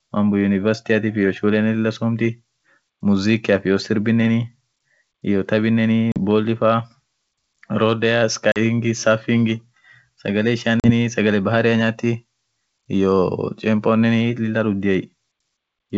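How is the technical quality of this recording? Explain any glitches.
Three brief dropouts break up the speech. Each is a hard-edged hole, and as the sound resumes there is some distortion that settles within a few tens of milliseconds. These are packet loss on an ADPCM call. The wideband G.722 coding itself is clear up to about 7 kHz, which fits full-rate 64 kbit/s operation.

The first gap is at 6.12 to 6.18 s. The second runs 8.52 to 8.58 s, just before "ring sagale". The third spans 10.80 to 10.91 s, between "ring sagale" and "sagale bahari". Each hole is about 40 ms, consistent with a couple of lost packets filled with silence. Because ADPCM codes each sample as a difference from a running prediction, the receiving decoder's predictor and step size drift out of step with the sender's during the silence. That causes the slight distortion on return until the decoder resynchronises.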